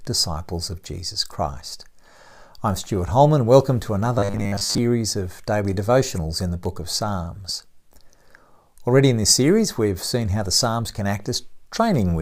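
After "to another", 4.19–4.78 s turns into a metallic 100 Hz buzz: robotic sound, likely from a 10 ms buffer repeated over skipped audio.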